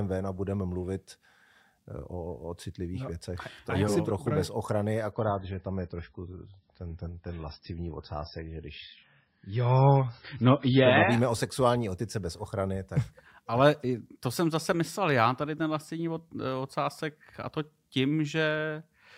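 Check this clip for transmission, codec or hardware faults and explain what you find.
One fault is present: an adaptive stream at a lower bitrate. From 5.12 to 11.12 s, just after "je trochu bez ochrany" and up to "o sexuální otice bez", the stream switches to a much leaner MP3 version, consistent with a drop from 128 to about 17 kbit/s, because the connection slowed. The speech turns dull and swirly without any gap. A spectrogram shows the treble abruptly cut off at 5.5 kHz for those six seconds, while the waveform stays continuous.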